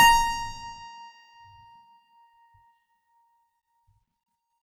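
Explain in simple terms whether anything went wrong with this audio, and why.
Nothing went wrong here: the music runs without any dropouts, distortion, glitches or other faults to report.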